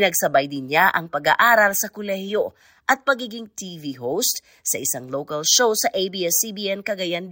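Throughout, the resampler restarted on every 10 ms block, which fits a 48 kHz to 44.1 kHz conversion. Edge errors produce a 100 Hz buzz riding on the speech.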